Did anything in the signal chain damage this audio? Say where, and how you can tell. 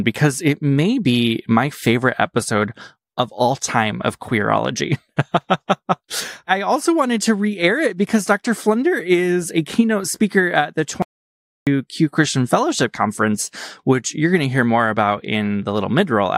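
Yes. At 11.02 s, just after "keynote speaker at the", the speech cuts to total silence until 11.67 s. That 0.65 s gap holds no room tone, which marks an audio dropout to silence. The input was likely lost at the device or link while zeros kept being written.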